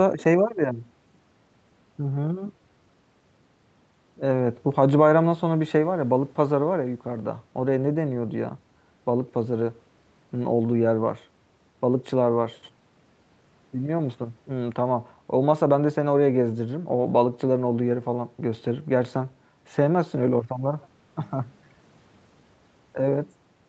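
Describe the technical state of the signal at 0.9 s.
At 0.9 s the signal is intact, with the speech carried cleanly through the call microphone processing and the Opus call path, its content extending only up to about 8 kHz.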